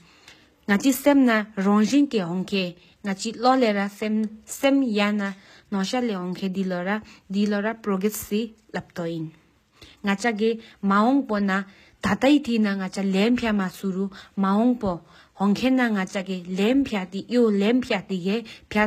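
From start to finish the speech carries plainly audible HE-AAC compression, likely at a low bitrate around 20 kbps. The top end is rebuilt by copying lower bands upward, so the s sounds come out gritty and lispy, and nothing survives above about 14.9 kHz.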